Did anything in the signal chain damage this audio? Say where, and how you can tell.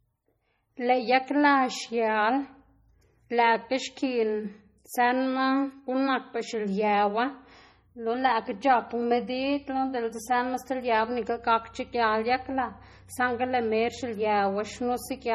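Yes. MP3 compression damage runs throughout the clip, at the codec stage. The speech has a watery, swirling texture and smeared consonant onsets, and s sounds carry metallic chirps. Nothing is present above 20.8 kHz. The heavy damage fits a low bitrate of around 32 kbps. The likely cause is an encoder short of bits that zeroed weak frequency lines frame by frame, so detail flickers on and off instead of holding steady.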